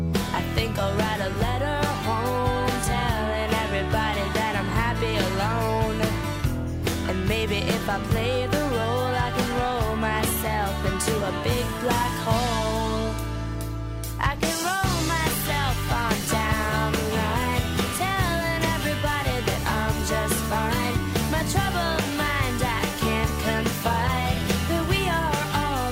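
Nothing in this one trips the ear as a fault at any point, so there's nothing here to flag.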